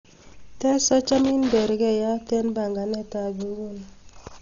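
From start to finish the speech carries heavy codec damage, most likely Dolby Digital compression at a low rate, something like 40 kbps. The encoder has run short of bits, so it cuts the band, leaving nothing above 7 kHz, and gives many frequency lines no real data. The decoder fills those gaps with noise. You hear a dull, muffled top end and a rough, fluttery hiss clinging to the voiced parts.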